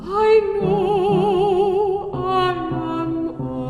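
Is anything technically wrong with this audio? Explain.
No, nothing technically wrong can be heard here.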